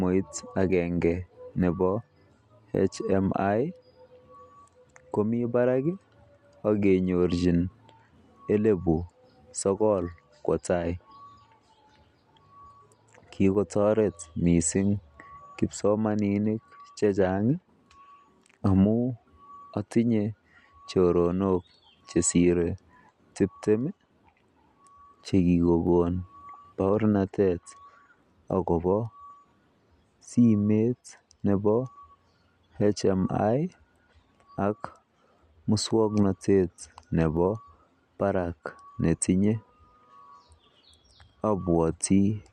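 No technical faults are audible in this speech recording. At no point does anything in the signal stand out as a defect.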